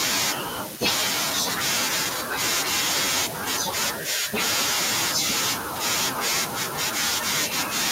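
No dropout, glitch, distortion or level fault can be heard anywhere in the recording.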